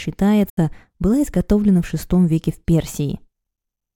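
At 0.49 s the speech cuts to silence for about 75 ms, resuming at 0.58 s further along, as though it had kept playing underneath. This is a Bluetooth dropout, likely packets arriving too late and discarded, with a gap that fits about four lost packets.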